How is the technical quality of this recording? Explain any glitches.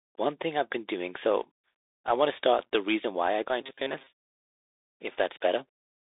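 The recording is clearly degraded: narrowband headset-codec damage runs through the whole clip, and a short robotic stretch appears just past the midpoint.

From start to finish the speech has the sound of the Bluetooth CVSD headset codec. Content sits roughly between 300 Hz and 3.7 kHz, and nothing above 3.8 kHz passes. The one-bit up/down coding points to a 64 kbps link, and it lags behind fast, loud transients, so s sounds turn scratchy over a grainy hiss. That granular edge sets it apart from a plain low-pass or telephone band-limit, which would sound muffled but clean.

From 3.61 to 4.07 s the speech turns into robotic sound from repeated short buffers, a rigid metallic buzz near 134 Hz that still loosely tracks the syllables. The likely cause is late-arriving audio being covered by looping the last fragment, which fits a buffer of about 7.5 ms. Roughly half of the stretch is repetition, so real audio is lost. 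The fixed pitch tells it apart from packet-loss dropouts or stutter, which leave gaps or audible jumps rather than a steady tone.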